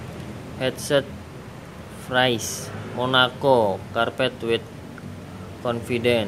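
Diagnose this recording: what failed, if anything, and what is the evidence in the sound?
Nothing failed: no dropout, click, distortion or level and timing anomaly is audible at any stage from capture through playback.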